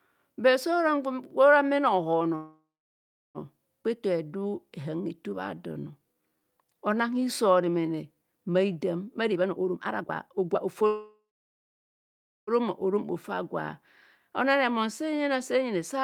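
From 2.35 to 3.38 s the speech stops on a fading buzz that drops to about 0.73 s of silence, then resumes with nothing lost. This call audio freeze likely comes from delayed packets emptying the jitter buffer.

Between 3.83 and 3.87 s there is a skip ahead: roughly half a second of speech vanishes and the two sides are joined almost seamlessly, because a stretch of audio was dropped while later audio was already waiting.

From 3.88 to 8.20 s the speech drags at 88% speed with unchanged pitch. This jitter buffer slow-down repeated pitch periods, adding 538 ms to rebuild its reserve.

From 9.30 to 10.84 s the speech sounds hurried at 150% speed with the pitch held. This jitter buffer speed-up cut roughly 0.7 s of short pitch-period pieces to shed excess delay.

From 10.87 to 12.50 s comes a second call audio freeze. A fading buzz gives way to about 1.26 s of silence, then the speech continues intact. 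It is likely another jitter buffer underrun from held-up packets.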